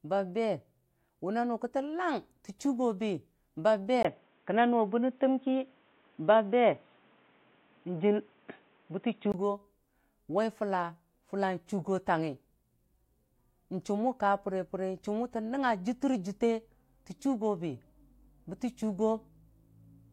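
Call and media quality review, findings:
4.03 to 9.34 s: speech dull, nothing above 3.8 kHz. 20 ms gap, level shift about 5 dB. Likely input switched to a poorer device.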